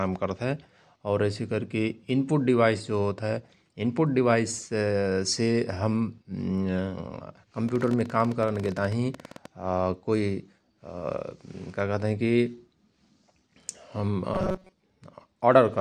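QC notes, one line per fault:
7.69–9.46 s, train of clicks: a run of short, similarly shaped pops, about 16 per second but unevenly spaced, roughly thirty in all, with peaks some 5 dB above the speech. They tick through pauses as well as through speech, which sets them apart from distortion crackle that follows the loudness of the signal. The likely source is interference from nearby equipment or a faulty connection injecting pulses.
14.34–14.74 s, robotic sound from repeated short buffers: for this 0.4 s the speech turns into a rigid, metallic buzz at 188 Hz. A fragment of about 5.3 ms is looped over most of the stretch while fresh audio is skipped, which fits a small playback buffer being refilled too seldom, the likely cause. Unlike codec warble, the buzz holds one fixed rate, though the rough shape of the words survives.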